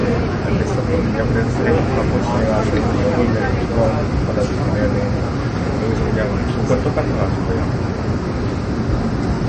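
Throughout, the sound is watery and swirly with smeared attacks and nothing above 8.3 kHz, likely MP3 compression at a bitrate that fits about 32 kbps.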